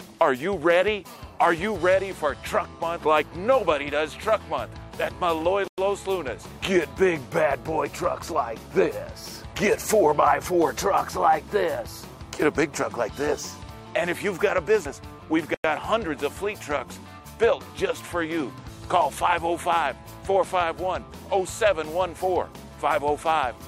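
At 5.68 s the sound stops dead for 100 ms, then resumes with nothing missing. This is a gap between chunks. The audio was delivered in 10-second pieces, and silence was inserted at the join. The same 100 ms gap returns at 15.54 s, about one chunk later. That regular spacing is the giveaway.

At 13.67 s the audio jumps forward. This is compressed frames skipped. Whole coded frames, each 21.3 ms long, were never played, so about five frames' worth, roughly 100 ms, is lost. A second skip at 14.85 s drops about three frames, roughly 70 ms.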